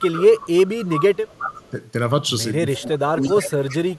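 From the start to 0.69 s the speech dips by about 15 dB, and a delayed copy of it trails roughly 353 ms behind until 1.17 s, at about 10 dB below the direct sound. That copy is echo leak, most likely a loudspeaker on one side whose echo canceller let part of the returning signal through. Fainter leaks follow at 1.56 to 1.70 s, about 25 dB down, and at 2.73 to 2.89 s, about 20 dB down. The last runs from 3.21 s to the end at about 20 dB down. All of them share the same 353 ms lag.

The speech sinks again from 1.19 to 1.77 s and from 2.79 to 3.86 s, by as much as about 20 dB. Together the three passages add up to about 1.7 seconds of muffled or missing stretches, which points to speech suppressed in double talk. The likely cause is an echo canceller that could not tell the near talker from the echo while both sides spoke, so it pulled down everything.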